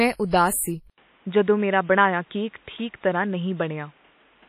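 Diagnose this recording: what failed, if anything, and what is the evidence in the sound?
At the codec stage, a transform encoder with long blocks, likely WMA at a low bitrate fitting 32 kbps, spread quantisation noise over tens of milliseconds and zeroed weak spectral lines. The speech is heavily damaged, ringing and washy, with breathing hiss and nothing above 15.3 kHz.

At the capture stage, the input likely switched to a poorer device at 0.90 s. After an 80 ms silence, the band stops at 3.8 kHz to the end, so the speech turns dull. A new noise floor sits well below the signal, and the level is unchanged.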